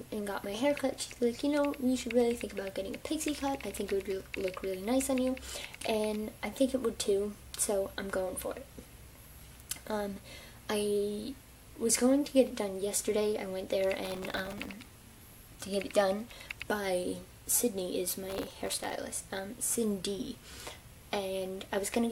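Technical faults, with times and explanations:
14.05–14.73 s and 18.30–18.93 s: processor overload crackle, many missed sub-millisecond buffers replaying stale audio with hard edges, giving a dense gritty burst, not isolated clicks.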